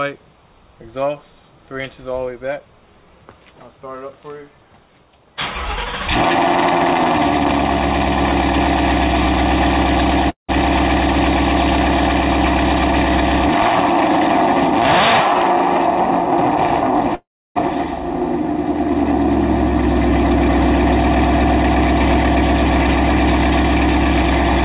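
At 10.3 s the sound stalls for about 0.2 s: the last instant carries on briefly as a fading buzz, then goes quiet for about 130 ms before resuming exactly where it stopped. This is a call audio freeze, likely from delayed packets draining the jitter buffer, so the receiver filled the wait instead of dropping anything. From 13.58 to 13.68 s the audio briefly hurries, running about 29% fast at unchanged pitch as the jitter buffer speed-up trims a few tens of milliseconds of pitch-period slices to cut the built-up delay. A longer freeze follows from 17.15 to 17.58 s: a short fading continuation, then about 320 ms of silence, with the sound picking up seamlessly afterwards. A second speed-up from 24.23 s to the end runs about 17% fast, removing roughly a tenth of a second. Throughout, the narrowband call codec leaves nothing above 4 kHz.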